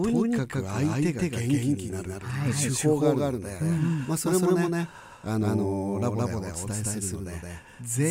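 A second capture path, likely running slower than the first, mixes the speech in twice throughout, producing a doubled audio track. The full-band copy trails by about 150 ms at roughly equal level, giving a dry, slapback echo with no room decay.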